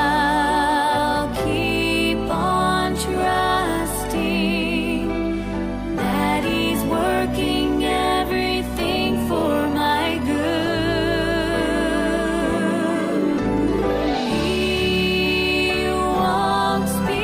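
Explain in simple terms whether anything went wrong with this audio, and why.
Nothing went wrong with this audio that a listener could pick out. Listening all the way along, no moment stands out as a problem, so there is nothing here that needs explaining.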